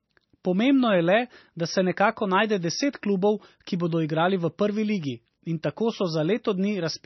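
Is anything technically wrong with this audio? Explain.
Yes. Throughout the speech there is heavy MP3 compression, likely from a very low bitrate (around 26 kbps). Starved of bits, the encoder drops everything above 5.9 kHz and lets weak frequency lines flicker between frames, giving a dull, watery, swirling sound. A spectrogram shows a hard ceiling at 5.9 kHz and patchy, blotchy energy below it.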